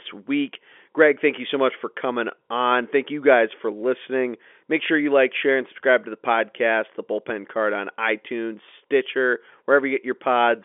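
No technical faults occur at any point in the speech.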